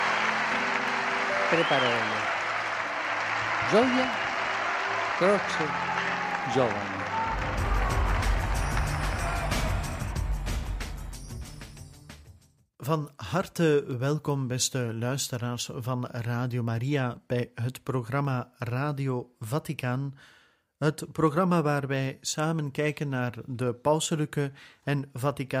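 From 0.88 s to 24.76 s a click recurs every 1.09 s, about twenty in all. The regular spacing points to clock drift buffer slips, likely from two devices running on independent clocks that disagree by something on the order of 150 ppm. The buffer between them gradually over- or underfills until a few samples are dropped or repeated to recover, and each of those small discontinuities is heard as a brief tick against the signal.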